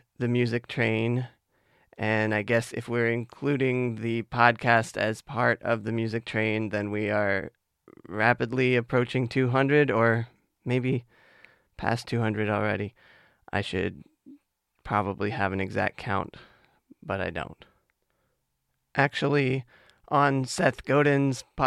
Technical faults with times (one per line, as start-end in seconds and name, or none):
none